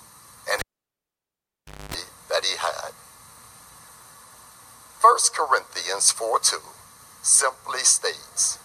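A live cable is pulled and plugged in again early in the clip. At 0.59 s a sharp pop marks the break, and the sound drops to near silence for about 1.3 s. Just before reconnection, a burst of 50 Hz mains buzz lasts about 0.25 s. This is the plug tip touching the socket without a ground connection. A second pop at 1.94 s marks full contact, and the sound returns.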